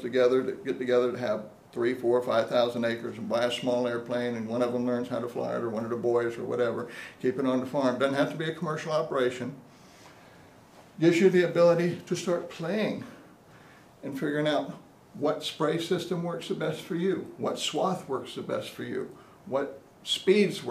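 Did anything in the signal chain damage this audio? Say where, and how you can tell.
No, nothing in the signal chain stood out as damaging this audio on listening.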